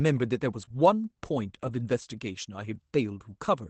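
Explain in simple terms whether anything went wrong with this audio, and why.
Yes, two kinds of fault can be heard in this speech, both from parts of the call going missing on the way.

Lost packet rebuilt from error correction happens twice, from 0.61 to 0.75 s and from 1.63 to 1.69 s. Small chunks of the call were lost, but the chunk after each one carried a rough backup copy, and the receiver played that copy instead. The sound never stops. It just turns grainier and noisier for a moment, which fits a few lost chunks being rebuilt this way.

Short concealed packet loss sits inside the first of those stretches, at 0.65 to 0.69 s and again at 0.69 to 0.72 s. Here there was no backup copy, so the receiver guessed. It stretched out the last bit of sound it had, then blended back into the real audio. That sounds like a brief smear or wobble rather than graininess, and a short sound caught in the hole can disappear.

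The call's own compression adds some background hiss throughout.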